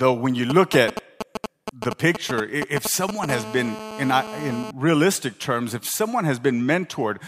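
Speech is interrupted from 0.5 to 3.26 s by GSM signalling bursts: a galloping dit-dit-dit of short, raspy buzzes repeating at about 217 Hz, only around 5 dB below the speech. A nearby 2G phone is exchanging brief groups of transmissions with the network, and the audio circuitry rectifies each radio pulse into sound. These broken clusters separate it from the steady buzz that follows. From 3.29 to 4.71 s there is a continuous GSM phone buzz, a hard, harmonic-rich rasp locked at about 217 Hz and about 11 dB below the speech. The phone has moved into a call and is now transmitting its bursts steadily, so the rectified pulse train runs unbroken. Its 217 Hz pitch and raspy edge distinguish it from smoother mains hum at 50 or 60 Hz, and it bears no relation to the speech underneath.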